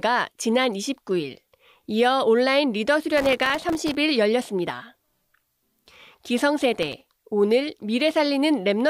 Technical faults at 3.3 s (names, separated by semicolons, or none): processor overload crackle